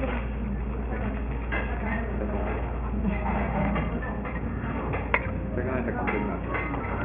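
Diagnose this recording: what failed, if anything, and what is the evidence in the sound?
No audible fault detected.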